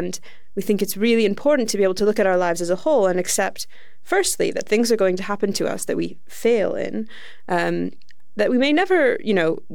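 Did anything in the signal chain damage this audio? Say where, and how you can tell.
Yes, there is a DC offset present for the whole speech clip, most plausibly introduced at the analogue front end or converter, where a small constant voltage reached the input. The entire waveform sits shifted off the zero line by about -30 dBFS, so its centre line is visibly displaced from start to end. It isn't heard as a tone, but on a spectrogram it appears as a steady band at 0 Hz, and it eats into available headroom on one polarity.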